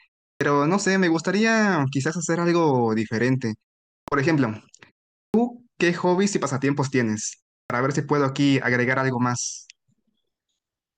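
The output device sleeps through silences and needs time to wake, so in this speech each restart loses about 46 to 50 ms. This clipped start after a pause occurs at 0.36, 4.03, 5.29 and 7.65 s, where speech bursts abruptly out of silence missing its opening sound.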